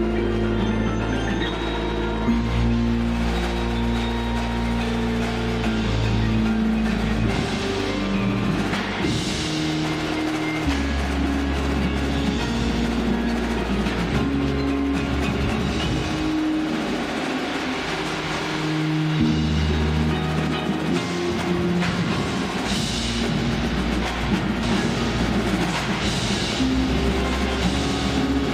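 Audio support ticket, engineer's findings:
Doubled audio track from 24.63 s to end of clip. Full-band copy trailing 1.5 s behind, about 5 dB down, starting abruptly. Likely a second capture via slower path, or misaligned edit holding two copies. Differs from echo or reverb: single repeat, no decay, no room colouring.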